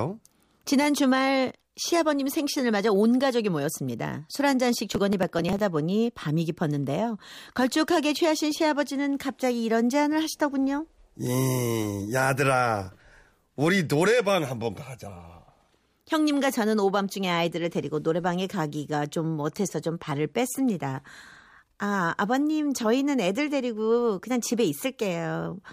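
From 4.91 to 5.59 s the speech picks up a gritty burst of crackle, then clears. This is processor overload crackle: around twenty very short buffers, roughly a millisecond and a half each, missed their deadlines and were skipped, leaving tiny hard-edged gaps.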